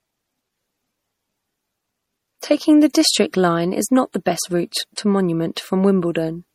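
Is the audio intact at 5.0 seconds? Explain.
No. Just before 5.0 s, at 4.96 s, pre-echo appears: the codec spread its quantisation noise across the block, so about 17 ms of hiss precedes the attack, which sounds smeared. Throughout, plainly audible MP3 compression, likely from a low bitrate around 48 kbps, starves weak frequency lines, giving a watery, swirly texture, with nothing above 19.6 kHz.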